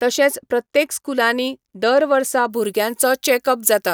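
From 2.5 s to the end, the speech turns thin, bright and sharply sibilant, with the top end standing out harshly. This is pre-emphasis left on: a treble boost following the 75 µs FM curve was never undone by its matching de-emphasis, leaving 10 kHz about 14 dB too strong relative to 1 kHz.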